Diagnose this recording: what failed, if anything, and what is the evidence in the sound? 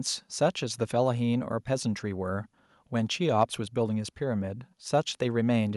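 Nothing failed: no stage of the chain, from wiring and conversion through buffering, processing, transmission, storage and playback, leaves an audible mark anywhere in this speech.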